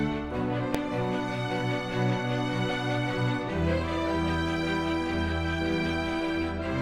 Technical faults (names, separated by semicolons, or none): invalid numbers at full scale